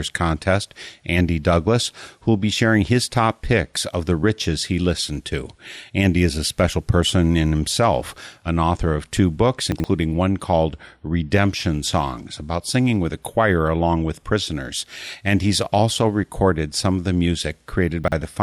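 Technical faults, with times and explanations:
9.72–9.84 s and 18.04–18.12 s: chunks out of order. A 40 ms chunk plays late: two chunks late between "author of two books" and "one called", then one chunk late near the end. Nothing is lost. The order jumbles briefly, and each leaves three hard joins.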